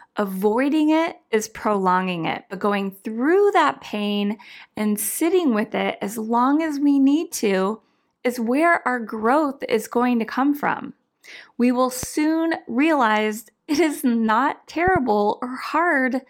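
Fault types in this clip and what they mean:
Loud pop: at 12.03 to 12.06 s there is one sharp pop about 10 dB above the speech, then at 14.88 to 14.98 s, after "realize it is not", two quick pops about 5 dB above it. The likely cause is a sudden voltage pulse added on top while the speech carries on underneath.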